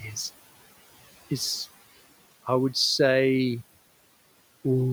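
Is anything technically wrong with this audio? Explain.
No, nothing is technically wrong with this audio.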